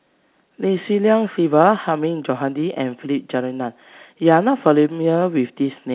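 No technical faults can be heard in this speech. The G.711 telephone path, working as A-law at 8 kHz sampling, leaves nothing above 4 kHz and a faint quantisation noise that rises and falls with the level of the speech.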